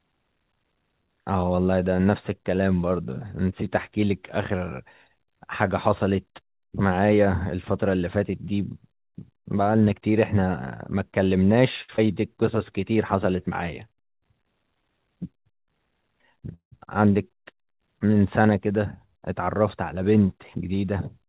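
The clip is speech heard over a call line. It is band-limited to nothing above 4 kHz, which fits narrowband G.711 A-law coding. At 11.82 s there is a short stall from a late packet. One sound is held for about 63 ms, until 11.90 s. A packet arrived after its playout time, so the jitter buffer ran dry. The receiver stretched the last sound to bridge the wait. Then it resumed from the same point. Nothing is lost, but the sound drags with a slight buzz or dip. It leaves the call about 63 ms further behind. Right after it, from 11.96 to 12.14 s, comes a short concealed packet loss. About 40 ms of audio never reached the decoder in time. The receiver patched only about 13 ms of that gap by extending the preceding sound, then blended back into real audio. The result is a quick smear, and a brief sound can drop out. Overall the stretch runs roughly 20 ms longer than it should, and the delay falls back by about 30 ms. 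From 14.67 to 15.05 s there is a jitter buffer speed-up. The audio plays at 113% of normal speed with unchanged pitch. The buffer held more audio than its target. So the receiver cut out pitch-period-sized slices, one after another, about 50 ms in all. The passage sounds rushed. A second speed-up runs from 18.71 to 19.53 s at 108%. It removes around 70 ms and sounds hurried more gently. At 16.54 s comes a call audio freeze lasting about 0.2 s, to 16.74 s. The last sound carries on as a fading buzz or hiss for about 177 ms, about 110 ms of which is silent. Then the audio picks up exactly where it stopped. The likely cause is packets held up in transit, emptying the jitter buffer. No audio is lost, but a gap is inserted, and the call falls about 177 ms further behind.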